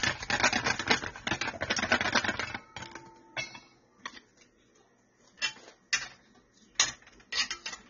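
From start to finish the sound is dull and smeared, with nothing above 7 kHz and a warbly, fizzy texture on anything sustained. That's likely AAC compression, plainly audible here, starving the spectrum, which fits a low bitrate around 24 kbps.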